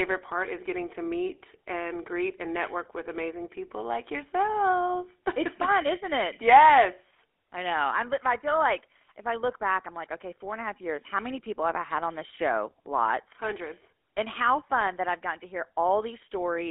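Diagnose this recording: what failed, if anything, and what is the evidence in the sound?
Codec stage: GSM full-rate codec throughout the speech, with a gritty buzz from its coarse pulse-driven excitation and a 300 Hz to 3.4 kHz band, consistent with a 13 kbps stream.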